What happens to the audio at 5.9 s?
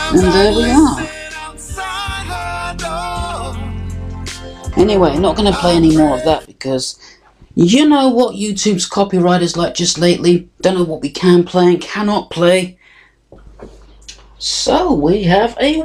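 Nothing goes wrong at 5.9 s; the audio runs on intact through that moment, with no dropout, click or other fault to be heard.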